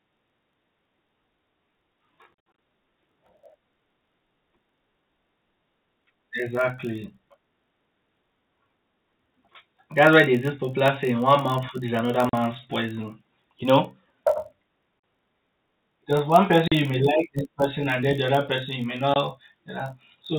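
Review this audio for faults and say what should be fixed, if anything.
A block size mismatch (padded) runs through the whole speech recording. Each block reaching the next stage is shorter than that stage's 1024-sample read and is topped up with zeros. This produces a steady buzz at 46.9 Hz and a 0.999 slowdown. Unlike mains hum, the buzz sits off 50 or 60 Hz. Matching block sizes between the two stages prevents it.

Packet loss filled with silence opens hard-edged holes at 2.52 s, 12.29 s, 15.00 s, 16.68 s and 19.14 s. The gaps last 40 ms at most of these points and 20 ms at 19.14 s. Near 2.52 s, 140 ms is lost across 240 ms, with the longest run at 60 ms. The lengths come in 20 ms steps, which fits 20 ms packets. Concealment would smear over the holes, but here they are dead silence. Jitter buffering and loss concealment would prevent this. The telephone-band G.711 coding is audible as the narrow band it carries.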